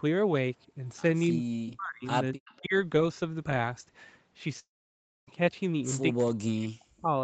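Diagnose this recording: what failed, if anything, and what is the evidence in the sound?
The call processing's echo canceller most likely misjudged double talk. With both sides speaking, it treated the near talker as loudspeaker echo and attenuated everything, producing speech suppressed in double talk. The voice sinks by about 20 dB at 1.3–1.55 s and 2.59–2.73 s. It sinks by about 40 dB, close to cutting out, at 1.74–2.07 s, 2.34–2.39 s and across a full second from 6.13 to 7.12 s.

The same canceller likely also failed to subtract all of the loudspeaker pickup, so an echo leak reached the far end. A copy of the voice trailing by 0.25 s surfaces in short scraps. At 1.68–1.74 s it sits about 15 dB under the speech. At 2.45–2.57 s it is fainter, around 30 dB down. Both leaks fall between the suppression dips.

At the network stage, a long network dropout likely stopped audio from arriving between 4.59 and 5.29 s, and 0.68 s of the signal never reached the receiver. 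The receiver's loss concealment stretched the last sound into a brief buzzy tail, then faded to silence for about 0.6 s. When the stream resumes at 5.29 s, it picks up further along, and the lost stretch is simply absent rather than delayed.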